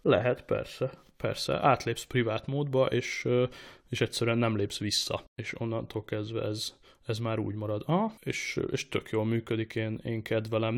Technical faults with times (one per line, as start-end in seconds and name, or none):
3.98 overlap between stream segments